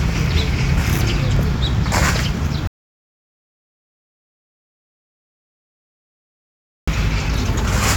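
The input feeding this recording of sounds appears to have been lost partway through, most likely a disconnected device, a failed link or an accidental mute, while the recorder kept writing silence. The result is an audio dropout to silence: at 2.67 s the sound cuts off abruptly into silence with no room tone, and it returns mid-flow at 6.88 s. Roughly 4.2 s of material is simply missing.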